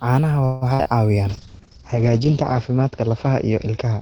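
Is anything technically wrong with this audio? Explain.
Yes, there are four call-transmission faults.

Call audio freeze, 0.45 to 0.64 s: delivery likely stalled, so the last sound stretches into a fading buzz or hiss for about 160 ms, then resumes late with nothing lost. On a spectrogram it appears as smeared, flat horizontal bands.

Burst of packet loss, 0.74 to 0.81 s: about 60 ms never arrives. The receiver extends and fades the previous sound, then jumps ahead. The waveform shows a decaying stretch followed by an abrupt change.

Short concealed packet loss, 0.83 to 0.87 s: roughly 20 ms is synthesized from the preceding sound and blended back in. It is heard as a brief smear or wobble, with a tiny blurred patch in the spectrogram.

Call bitrate drop, 1.3 s to the end: the audio turns rough and muffled. The spectrogram ceiling falls from about 20 kHz to 8 kHz, which fits a drop from around 48 to 8 kbps. 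The lowest stretch lasts about 1.1 s.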